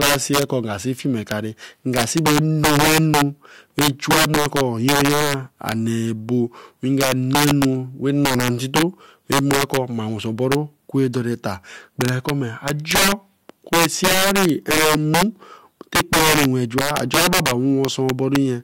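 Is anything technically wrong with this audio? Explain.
Yes. Integer overflow runs throughout this speech: driven about 11 dB too hot, the loudest peaks, a few percent of samples, exceed the integer range and wrap to the opposite sign instead of limiting. Each produces a violent crack, seen as abrupt sign flips on the waveform and broadband vertical streaks on a spectrogram.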